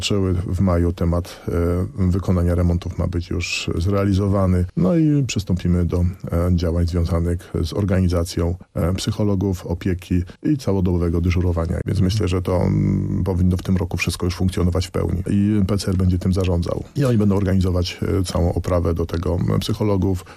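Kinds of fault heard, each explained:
MP2 compression: a dull, gurgling, granular distortion throughout, likely MPEG Layer II starved of bits at around 80 kbps; upper sub-bands flicker off, unlike a steady low-pass.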